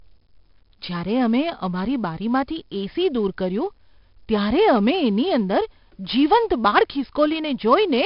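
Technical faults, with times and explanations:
Throughout: 4-bit ADPCM compression. Each sample is stored as a coarse 4-bit step from a prediction, so a heavy, gritty hiss follows the level of every loud syllable of the speech, with no warbly swirl as from transform codecs. Nothing above 5.3 kHz, fitting roughly 44 kbps.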